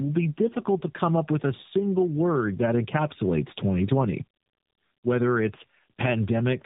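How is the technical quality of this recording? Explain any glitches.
The quality is degraded throughout by tandem speech coding. The speech was decoded and coded again at successive links, with two speech codecs in a row. Each one degraded the last one's output. Nothing reaches above 3.8 kHz. The voice sounds rough, muffled and warbly, which fits a G.729A and AMR-NB chain.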